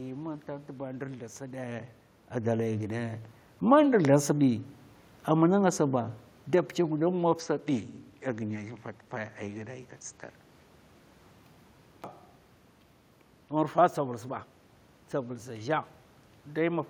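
A speech recording in which, from 2.32 to 3.25 s, voice and room noise swell together by about 5 dB. That is automatic gain rising, not the talker moving (as happens near 1.5 s), since the background climbs along with the voice. From 7.40 to 11.40 s the sound turns duller, with nothing above 8.7 kHz and a faint new noise floor far below the speech. The change comes with no gap and no level jump, and it reverses cleanly, which points to the input likely having switched to a poorer device rather than to steady codec band-limiting.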